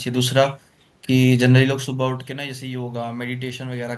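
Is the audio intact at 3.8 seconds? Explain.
No. Automatic gain rising runs from 1.86 to 3.95 s. After the input fell about 11 dB, the gain climbed about 5 dB, so the voice and room noise swell together.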